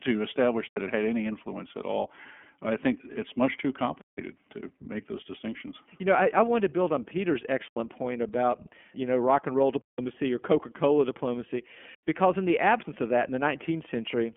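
Right from the start the speech has gone through the iLBC codec. Nothing above about 3.7 kHz survives, so it has that narrow phone-line sound. Each 30 ms frame's excitation is coded on its own without borrowing from the previous frame, which leaves the voice a little rough and synthetic. The damage is plainly audible and fits the 13.33 kbps mode.

On top of that there are five blocks of digital silence, where the audio drops straight to silence and comes back with no fade. Each one leaves a hole in the speech. The first is at 0.68 s, lasting 85 ms, between "to establish" and "it had any influence". A longer 171 ms gap follows at 4.01 s. Another 85 ms hole comes at 7.68 s, then 171 ms at 9.81 s just after "know rock and roll", and finally 85 ms at 11.95 s right before "because in the absence". Those two lengths fit whole 4096- and 8192-sample buffers going out empty, which is what you'd expect when the output wasn't filled in time.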